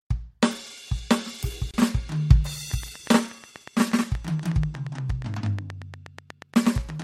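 At 1.71 s the music was evidently stitched together from separately encoded pieces, and the join was never trimmed. The encoder's start-up delay and the padding on the final frame of the earlier piece both stayed in, producing a gap at the join of encoded pieces of about 28 ms, running to 1.74 s. The music drops out abruptly, with edges softened by the codec, and then resumes exactly where it stopped.

From 2.71 s to 7.03 s, something is injecting pulses into the signal path, most likely interference from nearby equipment or a faulty connection or power supply. The result is a train of clicks: roughly forty near-identical pulses at a steady 8.4 per second, each peaking about 10 dB above the music. They come through as a regular ticking laid over the music until the end of the clip.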